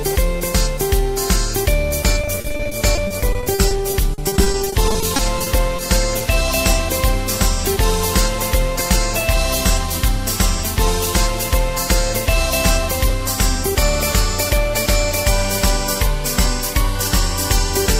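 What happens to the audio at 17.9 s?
Nothing goes wrong at 17.9 s; the audio carries on intact through that moment.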